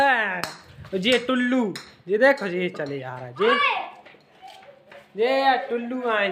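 Nothing in the audio goes wrong at any point, so there's no technical fault to point to here.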